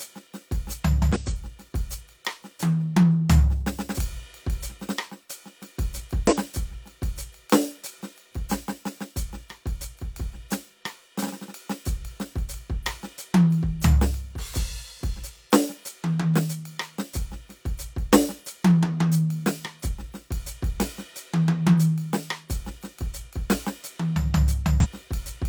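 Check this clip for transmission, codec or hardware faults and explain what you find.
The music has damaged data in a compressed stream at 1.12–1.18 s, 6.27–6.34 s and 24.80–24.86 s: corrupted frames make the decoder lose sync, producing brief 60–64 ms disruptions.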